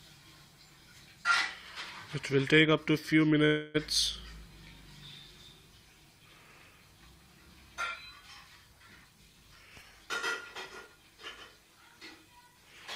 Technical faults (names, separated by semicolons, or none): call audio freeze; jitter buffer speed-up